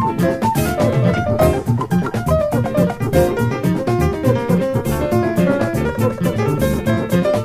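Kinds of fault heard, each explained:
No kinds of fault are heard, so there are none to explain.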